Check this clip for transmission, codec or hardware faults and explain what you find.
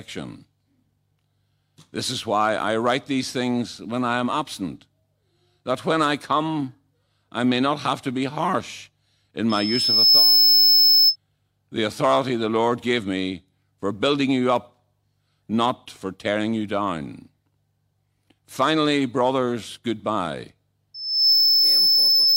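A piercing tone at 5.2 kHz swells up twice in this speech: from 9.49 to 11.16 s, between "to be harsh in" and "the authority the", rising over roughly 0.7 s to sit about 10 dB above the speech, and from 20.94 s to the end, after "brothers goodbye", building in about 0.4 s to about 5 dB above it. This is loudspeaker feedback squeal. The microphone hears its own loudspeaker, and at 5.2 kHz the loop's gain tops one, so that tone regenerates and grows.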